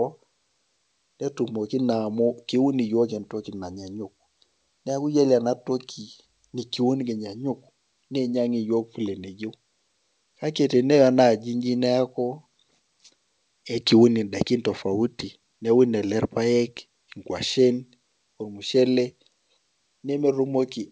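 No technical faults can be heard anywhere in this speech clip. It has passed through a WebRTC call path whose sound stops at 8 kHz, which fits the wideband G.722 codec at 64 kbps.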